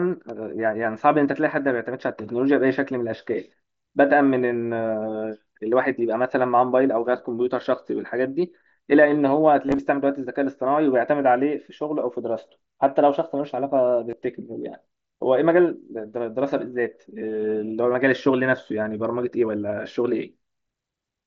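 Concealed Bluetooth headset packet loss at 9.67–9.79 s, 14.10–14.13 s and 17.93 s: lost packets refilled with repeated recent waveform, showing as buzzy, evenly-spaced harmonic striping on the spectrogram.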